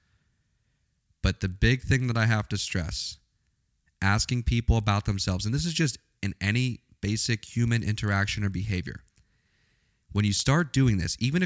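From start to finish there's a faint, steady buzz riding on the speech at 25 Hz, which is the classic sign of a resampler restarted on every block. The audio was converted in 40 ms chunks, apparently from 48 kHz down to 16 kHz, and each chunk was handled in isolation, so the filter had no real neighbouring samples at the edges. Each seam leaves a tiny tick, and at that rate they fuse into a buzz that drops away whenever the speech pauses.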